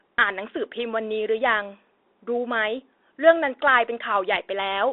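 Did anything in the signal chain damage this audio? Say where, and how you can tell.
Yes, at the codec stage, throughout: a Bluetooth CVSD headset codec. The speech is confined to roughly 300 Hz to 3.7 kHz, with scratchy s sounds and a granular hiss, typical of a one-bit delta coder whose step size lags loud high sounds. A plain telephone band-limit would sound clean, not gritty.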